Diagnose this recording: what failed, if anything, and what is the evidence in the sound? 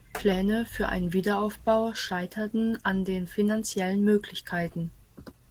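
Opus voice compression runs through the whole clip, at the codec stage. The speech sounds plainly hoarse and slightly robotic, yet keeps its top end, which fits hybrid coding at around 16 kbps: a linear-prediction coder quantises the excitation coarsely below 8 kHz while a transform layer covers the band above.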